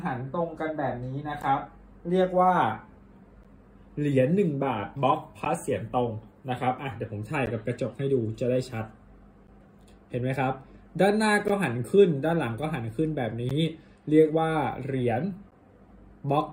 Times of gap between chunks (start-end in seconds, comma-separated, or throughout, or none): 1.42, 3.43, 5.45, 7.46, 9.47, 11.48, 13.49, 15.51